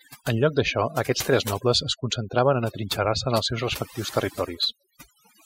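From start to finish the speech carries overdone noise removal: a suppressor set far too aggressively cuts frequency bands it judges to be noise, taking quiet speech detail with them. Pauses drop to near silence with twinkling specks.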